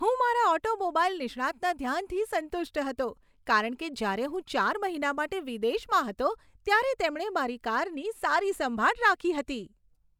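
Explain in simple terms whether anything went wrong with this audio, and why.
Nothing went wrong here; the speech sounds as it should.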